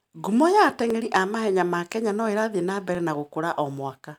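Speech with a regular click every 1.02 s from 0.90 to 3.97 s, likely clock drift buffer slips, each dropping or repeating a few dozen samples.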